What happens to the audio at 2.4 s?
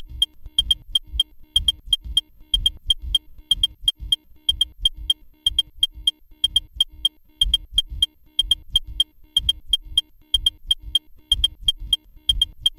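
Sample clock jitter is present at 2.4 s, as throughout the clip: a wandering converter clock, timing errors of roughly 3 µs, puts samples slightly off their instants, leaving a hiss or roughness about 25 dB below the sound that grows on loud, bright passages.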